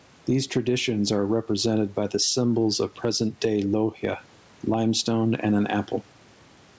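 Gain pumping runs through the whole clip, with the gain swinging around 10 dB. Likely cause: input gain set far too high, with a fast limiter clamping down. Nothing above 8 kHz comes through, which fits a wideband call codec such as G.722.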